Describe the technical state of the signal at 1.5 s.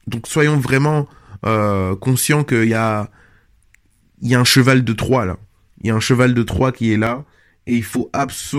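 At 1.5 s the speech signal is intact, with no audible fault at that moment.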